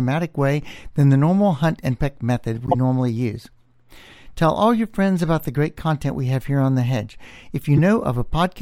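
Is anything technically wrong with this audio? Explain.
Yes. Damaged data in a compressed stream appears three times: at 2.67 to 2.75 s after "hunt and peck method", at 5.27 s after "all your friends", and at 7.77 to 7.79 s. Corrupted frames throw the decoder out of sync, producing short chirps or blips.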